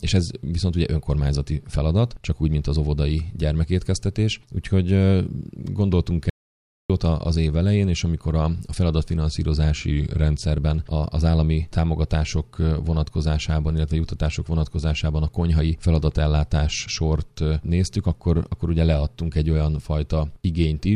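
At 6.30 s the sound cuts out and returns at 6.90 s, an audio dropout to silence lasting 0.6 s with no room tone. The input was likely lost through a disconnected device, failed link or stray mute. The waveform shows a flat line, and the spectrogram a blank vertical band.

From 9.91 to 10.42 s a drift correction step, likely from clock-matching software altering the playback rate, slows the audio by 5.6% and drops pitch by about a semitone. On a spectrogram the harmonic lines step down together for that stretch, then return.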